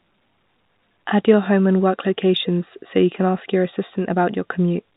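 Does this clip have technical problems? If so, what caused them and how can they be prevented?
No, this clip has no technical problems, so there is nothing to trace to a cause or prevent.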